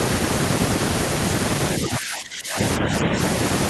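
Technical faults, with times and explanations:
1.80 to 2.58 s and 2.79 to 3.17 s, speech suppressed in double talk: the speech dips twice, first sharply, by around 20 dB at its deepest, then only slightly, by about 5 dB. This is likely an echo canceller that could not tell this side's talk from the overlapping far-end echo and pulled the level down. Unlike a dropout or codec gap, the level ducks with the overlapping talk, and it recovers in between.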